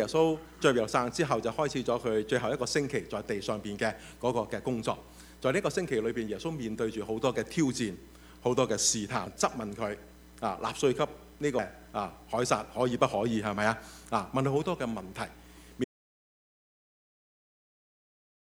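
Damaged data in a compressed stream shows up at 9.27 s and again at 11.59 s, each as a brief blip in the audio. At those points the encoded bytes no longer make sense to the decoder, so it mangles or throws out the affected frames, loses its place and hunts for the next valid frame header before playback settles again. The short, abrupt artefact is the sound of that failed decode. An audio dropout to silence begins at 15.84 s and runs to the end of the clip. The sound stops mid-flow and what follows is dead digital silence, with no room tone or background hiss underneath. The likely cause is that the input signal was lost, for example through a disconnected device, a failed link or an accidental mute, while recording carried on writing silence. Whatever would have been heard after 15.84 s is missing.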